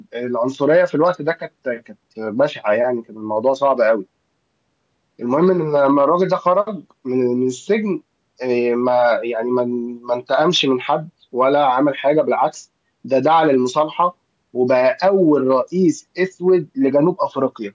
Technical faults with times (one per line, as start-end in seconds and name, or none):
none